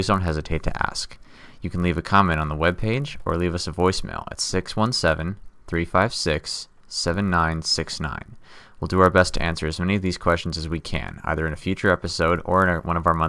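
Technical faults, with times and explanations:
Throughout: resampler restarted on every block. Each 20 ms block was converted without its neighbouring samples, which fits a 48 kHz to 24 kHz conversion, so every block edge carries a small error. This is heard as a 50 Hz buzz on the speech that, unlike mains hum, vanishes in pauses.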